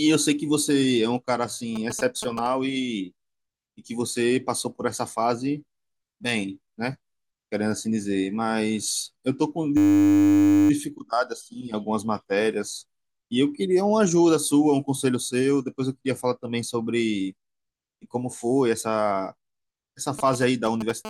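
From 1.76 to 2.47 s, and again from 20.19 to 20.91 s, GSM signalling bursts break in: a galloping dit-dit-dit of short 217 Hz buzzes, roughly 10 dB under the speech. A nearby 2G phone is exchanging control bursts with the network, and the audio circuit rectifies them. Unlike a steady call buzz, these come in short clumps.

At 9.77 s the system hang loop takes over until 10.7 s. The machine stalled while the sound hardware kept replaying the same 10 ms slice of buffer, more than ninety times, so the audio turns into a steady 100 Hz buzz. It is a repeat of the speech itself, not interference laid over it.

In the last instant, 21.05 to 21.09 s, GSM phone buzz appears at about 9 dB below the speech. This is the continuous 217 Hz rasp, rich in harmonics, of a phone transmitting during an active call. It is unbroken rather than galloping like the earlier signalling bursts.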